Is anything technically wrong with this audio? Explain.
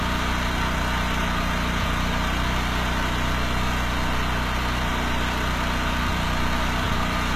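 Yes. Throughout, the treble appears rebuilt by band replication, likely from HE-AAC compression at a rate near 20 kbps, leaving gritty, metallic highs and nothing above 14.9 kHz.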